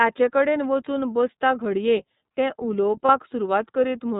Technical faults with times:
0.00-4.20 iLBC codec
3.06-3.10 lost iLBC frames

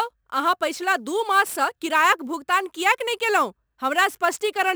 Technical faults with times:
0.00-4.75 sample clock jitter

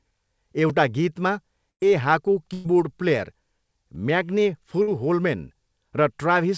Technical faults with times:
0.70 block of digital silence
1.70-1.81 burst of packet loss
2.53-2.66 burst of packet loss
4.82-4.89 burst of packet loss

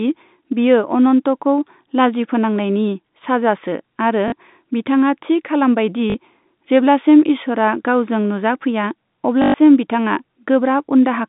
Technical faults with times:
4.28-4.32 packet loss with last packet repeated
6.10-6.14 packet loss with last packet repeated
9.42-9.54 packet loss with last packet repeated

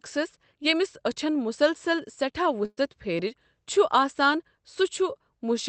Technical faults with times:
2.65-2.79 burst of packet loss

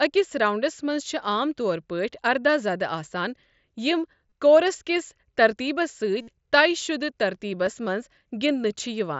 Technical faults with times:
4.29 concealed Bluetooth headset packet loss
6.21-6.28 concealed Bluetooth headset packet loss
7.66 concealed Bluetooth headset packet loss

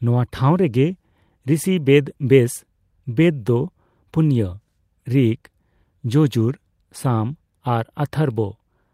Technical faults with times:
none

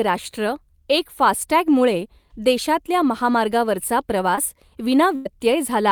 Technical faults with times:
4.35-4.39 short concealed packet loss
5.16-5.27 burst of packet loss

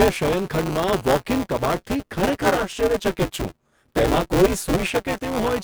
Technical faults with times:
0.00-5.63 buffer tearing

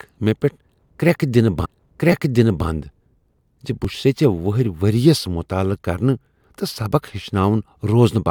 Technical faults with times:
1.64-2.66 stream segment repeated
2.12 repeated buffer
3.85 repeated buffer

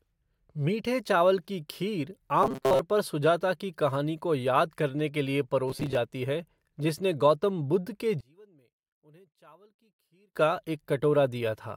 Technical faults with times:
2.43-2.81 robotic sound from repeated short buffers
5.68-5.99 robotic sound from repeated short buffers
8.21-10.36 one channel inverted

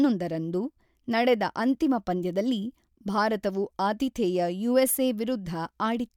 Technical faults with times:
none

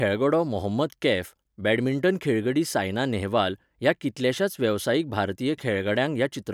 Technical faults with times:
none

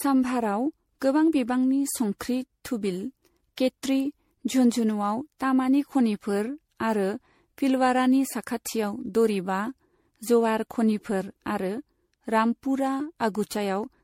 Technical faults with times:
0.00-14.04 generation loss

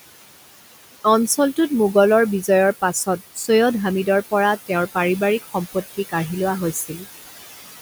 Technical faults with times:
0.00-7.81 noise suppressor artifacts
6.73-7.06 speech cut by the noise suppressor

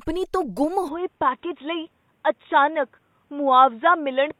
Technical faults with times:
0.88-4.39 input switched to a poorer device

